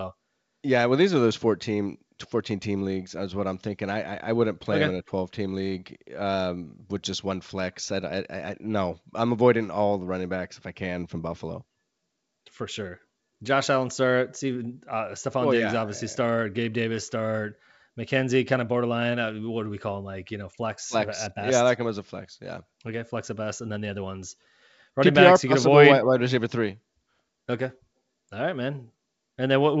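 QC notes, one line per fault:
No faults heard.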